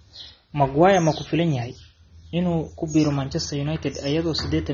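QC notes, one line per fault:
Throughout, AAC compression: nothing above 6.9 kHz, dull, smeared speech with a plainly audible warbly texture, likely AAC-LC at a low bitrate consistent with 24 kbps.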